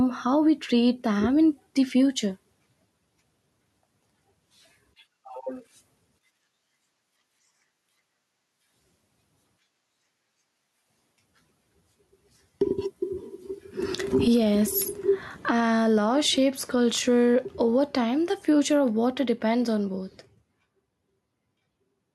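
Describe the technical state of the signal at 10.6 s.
At 10.6 s there's gain pumping, present across the whole clip: the gain ducks by roughly 15 dB under loud speech, likely from overdriven gain hitting a fast limiter.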